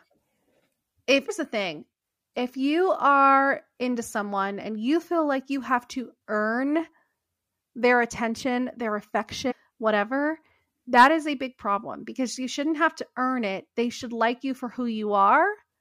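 At 1.28 s and again from 9.50 to 9.52 s, damaged data in the compressed stream throws the decoder off sync; each spot is heard as a brief glitch in the speech. From 10.97 to 11.07 s, peaks driven about 4 dB past the stage's limit are flattened by hard clipping, adding a short crackle to the loudest syllables.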